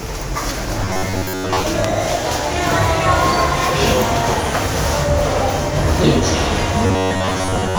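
Robotic sound from repeated short buffers occurs from 0.83 to 1.62 s and again from 6.87 to 7.78 s. Fresh audio likely arrives too seldom, so a fragment of about 10.7 ms loops through most of each stretch, imposing a rigid, metallic 93.8 Hz buzz.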